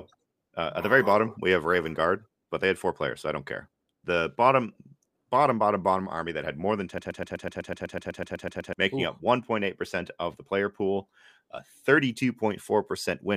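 At 6.98 s, just after "that had more than", the speech locks into a broken-record loop: a fragment of about 125 ms repeats exactly, back to back, 14 times until 8.73 s. The result is a rapid mechanical stutter with no forward progress. The likely cause is a stall in the player, encoder or stream that kept resending the last fragment it held. Whatever should have played during those 1.75 s is lost.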